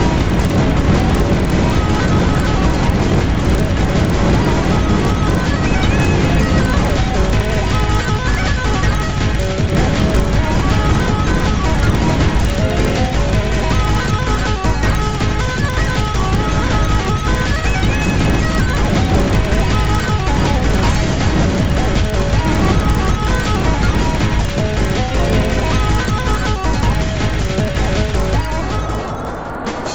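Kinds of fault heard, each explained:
Resampler restarted on every block: the rate converter processed each 50 ms chunk in isolation, so at every chunk edge it filtered against missing or wrong neighbouring samples, leaving a small error there. The result is a tick every 50 ms, a steady 20 Hz roughness through the whole clip that appears only when sound is present. The bandwidth points to a 16 kHz to 48 kHz upsampling. A spectrogram shows thin vertical lines evenly spaced 50 ms apart, and the waveform shows small discontinuities at each boundary.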